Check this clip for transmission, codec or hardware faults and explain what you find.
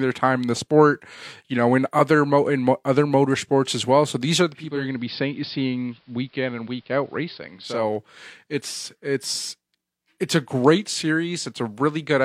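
One fault is present. Digital radio blending to analogue, 4.47 to 7.93 s, after "these are": the receiver lost its digital stream and cross-faded over about 0.47 s to the AM broadcast, so the speech loses treble, drops about 2 dB, and gains faint hiss roughly 40 dB down, before returning to digital at "it's it's".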